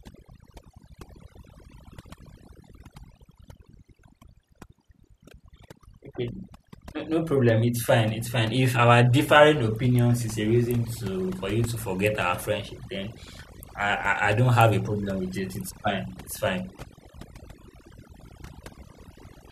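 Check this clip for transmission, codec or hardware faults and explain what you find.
The one problem here is processing rather than transmission: overdone noise removal, running the whole way through. The denoiser was pushed too hard, so any frequency band sitting near its noise estimate gets slammed down, taking the quieter parts of the speech with it. That leaves near-silent gaps sprinkled with twinkly specks.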